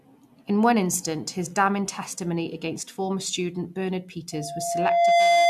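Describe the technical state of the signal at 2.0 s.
At 2.0 s the audio is intact, with no fault of any kind audible at that moment.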